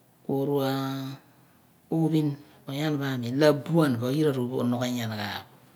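No audible technical faults occur anywhere in the recording.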